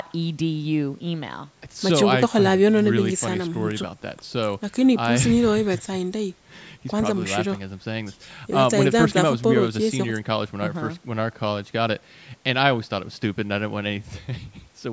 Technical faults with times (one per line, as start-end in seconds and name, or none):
none